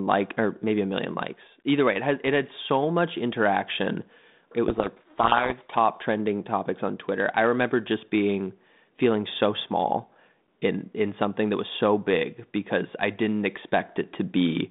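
From 4.68 to 5.77 s, just before "trending topics on", there is a codec payload misread. The G.726 code words arrive with their bit order reversed. The decoder reads the wrong differences. Speech is buried in harsh distortion. It clears when framing agrees again.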